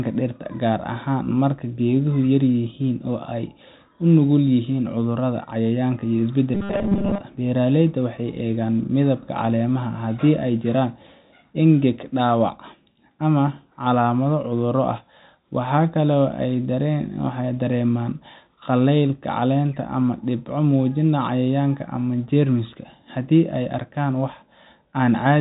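From 6.55 to 7.22 s the speech becomes a rigid metallic drone locked at 200 Hz. This robotic sound from repeated short buffers, likely 5 ms blocks repeated in place of most of the real audio, holds a fixed pitch, unlike a natural pitch shift.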